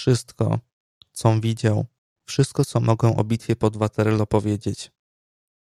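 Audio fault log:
No audible faults detected.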